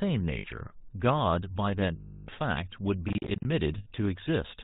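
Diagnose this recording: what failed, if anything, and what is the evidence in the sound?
Codec stage: the whole thing has that buzzy, gravelly GSM full-rate codec roughness with nothing above 4 kHz, which fits a 13 kbps link.

Network: lost GSM frames at 0.38–0.47, 1.96–2.29 and 3.78–3.87 s. The last good frame gets repeated as a metallic ring.

Driver or buffer stage: processor overload crackle, a gritty tearing from 3.09 to 3.45 s. Missed deadlines leave a run of short silent holes, which fits roughly 10 ms buffers.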